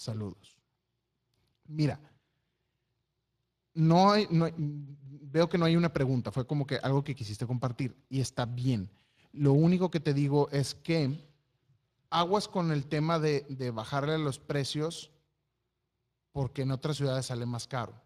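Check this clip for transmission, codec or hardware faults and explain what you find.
One codec fault runs the full length of the speech. Speex codec damage is plainly audible. The CELP coder models the voice with a coarse excitation, leaving it hoarse and grainy, which fits a bitrate around 22 kbps. Nothing is present above 15.4 kHz.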